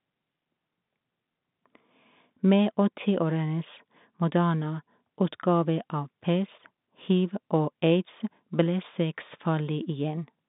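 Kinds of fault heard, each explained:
No fault of any kind can be heard in the speech. It arrives through G.711 telephone coding, so the sound is confined to a line band of about 150 Hz to 3.7 kHz, with nothing above 3.8 kHz.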